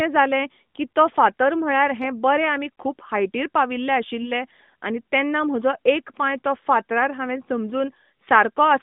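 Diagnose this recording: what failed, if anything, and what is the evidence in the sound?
Network stage: lost AMR speech frames. Brief dips at 4.22 s, after "हायटीर पाविल्ले", and 6.40 s, before "तो फातरार हांवेन". Each time, the decoder covered one 20 ms frame.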